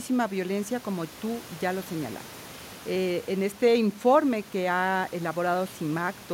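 Nothing in this speech recording stood out on listening, and the faint room noise sits about 20 dB below the talking.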